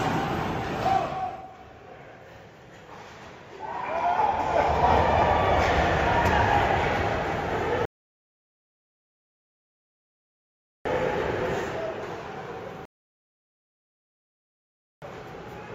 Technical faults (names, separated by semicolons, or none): rebuffering stall